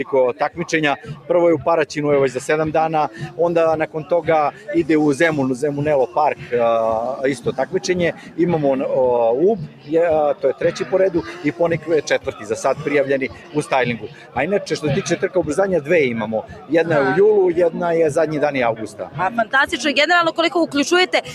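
The level pumps and flutters across the whole clip, with sustained parts and decaying tails sinking while sharp onsets push through, a swing of about 10 dB. This is a noise suppressor applied to music or sounds: a speech-oriented suppressor treats steady tones and ambience as noise and keeps ducking them. The worst passages, heard as sound cut by the noise suppressor, fall by about 10 dB at 0.33–1.3 s, 3.08–4.69 s, 6.07–6.52 s, 7.36–8.39 s, 9.61–14.37 s, 16.42–16.71 s and 18.75–19.53 s. Held material thins or its tail is chopped short there, in scattered pieces rather than continuously, adding up to about two seconds within the long 9.61–14.37 s stretch.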